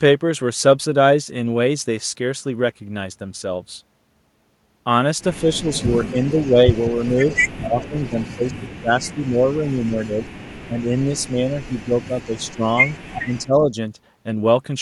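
An echo canceller likely failed to remove the far-end loudspeaker pickup, so an echo leak sends back a delayed copy 175 ms behind the speech from 5.39 to 8.28 s, at roughly 20 dB below it. From 5.44 to 12.64 s, speech suppressed in double talk sets in as the canceller likely cannot separate the talker from the echo while both sides speak. The voice dips in pieces by up to about 20 dB, for roughly five seconds in total. The echo leak returns, fainter at about 40 dB down with the same 175 ms delay, from 9.25 to 10.05 s and from 10.98 to 13.38 s, probably from the same uncancelled loudspeaker path. At 13.23 to 13.72 s, overlapping talk again likely triggers suppression, briefly pulling the voice down by about 15 dB for roughly 0.4 s.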